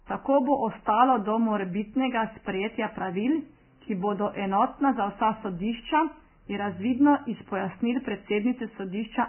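Vorbis compression runs through the whole of this speech, most likely from encoding at a very low bitrate, with heavy damage that fits something near 10 kbps. At that rate the encoder keeps only a coarse spectral outline and spends too few bits on the fine detail, so nothing survives above 3.1 kHz and the remaining upper band turns to grainy hiss of similar energy. Voiced sounds come across roughened, and consonant onsets are smeared rather than crisp.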